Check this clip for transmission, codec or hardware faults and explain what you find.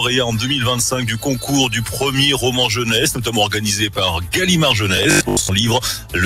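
Three kinds of fault are audible.

A noise suppressor applied to music or sounds stays on for the whole clip. It treats steady tones and decaying tails as noise and pulls them down, so the level keeps pumping, swinging by roughly 5 dB, while attacks come through.

The sound is cut by the noise suppressor at 1.08 to 1.23 s, 3.14 to 3.3 s and 5.98 to 6.14 s. Each time, the suppressor misjudges the sound as noise and ducks it, by about 6 dB, about 4 dB and about 7 dB. The dips sound like brief sags.

Robotic sound from repeated short buffers appears from 4.97 to 5.51 s. The sound turns into a rigid, metallic buzz at 50 Hz. The likely cause is late audio, with the last short stretch replayed to fill the gaps, which fits a 20 ms buffer. Roughly half of that span is repeats.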